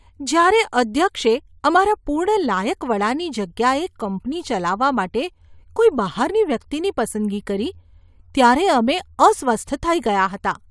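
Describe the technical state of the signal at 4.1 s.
At 4.1 s the speech signal is intact, with no technical fault present at that moment.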